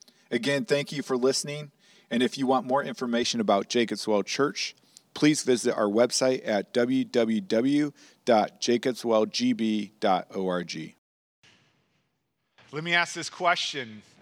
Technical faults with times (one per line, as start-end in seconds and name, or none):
0.00-3.23 channel delay (comb filtering)